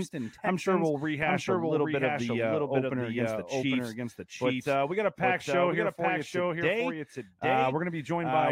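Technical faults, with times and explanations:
Throughout, doubled audio track: the speech is repeated roughly 0.7 s late at around 5 dB lower, full-band and dry, likely from a second capture path.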